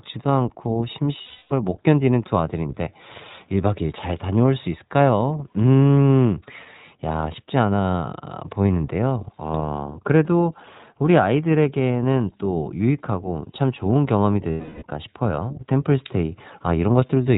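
Right from the start the whole thing runs through the iLBC codec, and you can plainly hear it. Everything above 4 kHz is gone, so the speech has that boxed-in narrowband quality. There's also a slightly gritty, synthetic edge, because each short frame's excitation is rebuilt on its own without smoothing across from the previous frame. The damage sounds like the 15.2 kbps mode with 20 ms frames.

Then there are two spots of lost iLBC frames. The first runs from 1.22 to 1.52 s and the second from 14.50 to 14.83 s, roughly 280 and 320 ms of missing audio. In each gap the decoder keeps repeating the last pitch cycle it had, blended with noise and fading out. You hear a held, buzzy, breathy vowel where the speech should be, and then clean speech returns almost immediately once packets arrive again.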